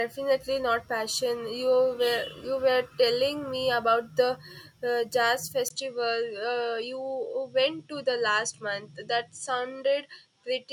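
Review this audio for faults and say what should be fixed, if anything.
At 5.68 s, right after "uh jazz", there is a 20 ms gap, and from there to the end the sound loses everything above 10.5 kHz and picks up a new, faint background noise, likely from the input switching to a poorer device. The loudness stays about the same. The short silence and the changed noise floor set this apart from a filter or codec change applied to the same signal. To prevent it, lock the recording input so the system cannot swap devices mid-session.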